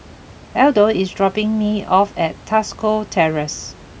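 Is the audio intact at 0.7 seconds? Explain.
Yes, the speech is intact at 0.7 seconds, with only the room's own background noise sitting about 23 dB below the voice.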